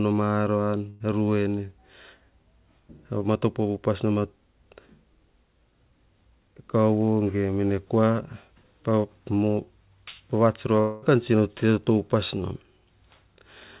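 A speech recording, heard through a call path whose band stops at 4 kHz, which fits G.711 mu-law at 64 kbps. Right after "ma aran", from 0.90 to 1.02 s, there's a burst of packet loss: roughly 100 ms gets smeared into a fading continuation of the last sound, then the speech jumps ahead past the missing bit. From 10.80 to 11.04 s the last sound stretches out and fades for about 220 ms and picks up later with that chunk gone, likely a long network dropout.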